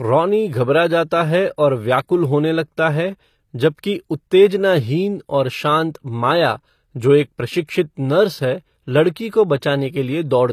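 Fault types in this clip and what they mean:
HE-AAC compression: The plainly audible codec damage throughout this speech likely comes from HE-AAC at a low bitrate, consistent with about 24 kbps. Only the lower spectrum is coded; the treble is rebuilt by copying lower bands upward, so its harmonics no longer line up with those below. On a spectrogram the upper region looks like repeated copies of lower bands under a coarse, blocky envelope, and nothing appears above 14.9 kHz.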